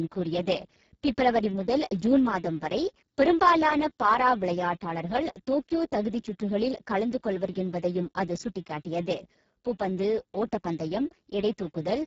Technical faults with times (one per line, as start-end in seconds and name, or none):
0.00-12.06 Speex codec